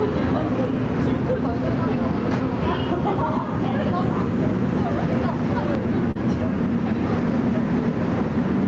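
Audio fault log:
throughout, gain pumping: the level ducks by about 5 dB under each loud sound, likely from a fast limiter reining in excessive microphone gain.
6.11 to 6.17 s, short concealed packet loss: about 40 ms of audio never arrived, so the receiver extended the preceding sound and blended back, leaving a brief smear.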